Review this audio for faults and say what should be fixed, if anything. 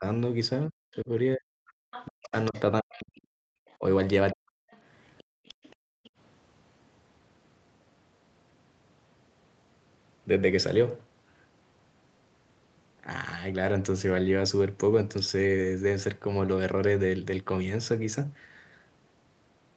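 Speech suppressed in double talk: the speech dips briefly from 0 to 0.05 s by about 15 dB. It is gouged repeatedly between 0.67 and 4.73 s, for around 2 s in total and by up to about 40 dB. The likely cause is the echo canceller attenuating the near talker along with loudspeaker echo. On a waveform, the envelope shows sudden notches. On a spectrogram, the speech energy fades, with the upper harmonics going first. Use an echo canceller with proper double-talk detection that attenuates only the echo.

Other side's voice leaking through: a second voice comes through at 1.67–2.6 s, about 15 dB below the speech. It recurs at 3.18–3.76 s, about 35 dB below, and at 4.71–6.1 s, about 25 dB below. This is likely residual loudspeaker echo that the canceller did not fully remove. A spectrogram shows a fainter, unrelated harmonic pattern overlapping the main speech. Improve the echo path modelling, or lower the loudspeaker level and increase the mic-to-speaker distance.

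Background gated by the echo canceller: the room sound drops out between 5.24 and 6.11 s, for about half a second in total, falling by about 38 dB. This is the canceller clamping the microphone while the loudspeaker plays. A waveform shows the noise floor collapsing to near silence. A spectrogram shows a dark vertical gap in the background texture. Use comfort-noise insertion or softer suppression.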